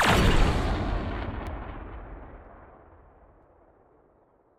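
At 0.49, 1.47, 2.45 and 3.43 s the sound skips forward by about 20 ms and rejoins without a gap. This is audio missing between chunks, likely from a recorder handling roughly one-second blocks and dropping a sliver at each handover.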